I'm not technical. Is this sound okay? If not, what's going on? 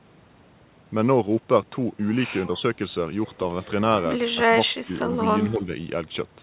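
No. The voice sinks sharply from 4.34 to 4.96 s and dips slightly from 5.45 to 5.7 s, likely speech suppressed in double talk: the echo canceller turned the talker down while both sides spoke.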